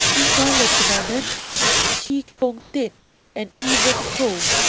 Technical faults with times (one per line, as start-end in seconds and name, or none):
1.40-1.56 sound dropped by the voice detector
2.06-2.10 sound dropped by the voice detector
2.28-3.62 comfort noise in place of the background
3.60-3.62 onset clipped by the voice detector